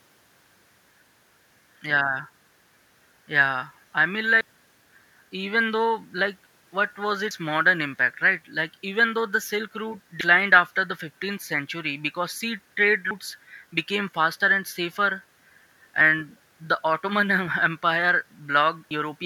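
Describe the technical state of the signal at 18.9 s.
At 18.91 s the speech skips forward abruptly. About a tenth of a second of audio is missing, and the two sides butt together with no silence. This is audio missing between chunks, likely from a recorder handling audio in 3-second chunks.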